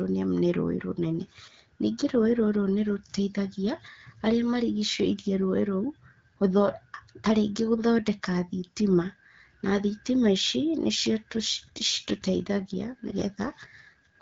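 Speech carried over an AMR wideband (HD Voice) link, where an AMR rate drop sets in at 11.33 s and holds to the end. The network pushes the codec to a lower mode, which fits a step from 12.65 to 8.85 kbit/s, so the voice turns rougher and more synthetic while the bandwidth stays the same and nothing drops out.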